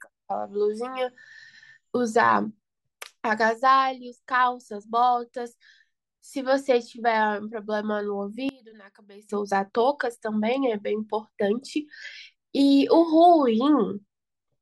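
From 8.49 to 9.29 s, the speech suddenly drops by about 23 dB. The centred voice and its low end nearly disappear, leaving a faint trace. The likely cause is one channel inverted. With one stereo channel in reversed polarity, the parts common to left and right cancel when the two are summed to mono. Only their small differences survive, which is why the voice sounds so weak and empty.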